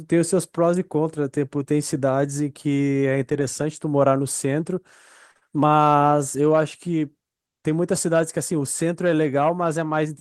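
At 5.31 s a short stall from a late packet begins: a packet missed its playout time, the jitter buffer ran dry, and about 38 ms of the preceding sound was stretched before playback resumed from the same point. Nothing is lost, but the sound hangs briefly, and the delay grows by 38 ms through 5.51 s.

Inside that stretch, from 5.37 to 5.43 s, comes a short concealed packet loss: about 40 ms of audio never arrived and was replaced by roughly 41 ms extrapolated from the last sound, heard as a brief smear before the real signal blends back in.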